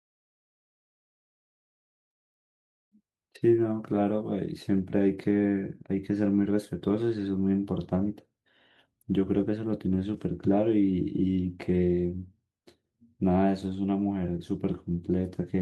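No technical faults can be heard anywhere in the recording.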